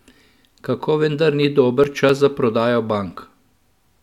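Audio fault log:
1.84–3.11 s: CD scratch ticks. Six short ticks fall at a steady rate, about four per second. The longest lasts only a few milliseconds. A surface blemish defeats the error correction once per disc turn, so the player patches or silences those samples.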